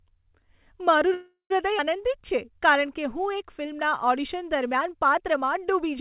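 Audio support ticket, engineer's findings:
Call audio freeze, 1.14 to 1.52 s: last sound held as a fading buzz, about 110 ms of it silent, then speech resumes where it stopped. Likely packets stalled and the jitter buffer ran dry. Unlike a skip, 361 ms inserted, nothing lost.

Skip ahead, 1.78 to 1.81 s: abrupt forward jump, only a 4 ms fill, roughly a tenth of a second of speech gone. Audio dropped in transit or on buffer overflow. Distinct from the freeze: no stall, content missing.

Jitter buffer slow-down, 2.01 to 3.22 s: speech drawn out to 93% speed, pitch unchanged. The buffer repeated pitch periods, adding 90 ms to rebuild its reserve. A resampling fault would drop pitch, so this is not one. G.711 mu-law band limit at 4 kHz present throughout.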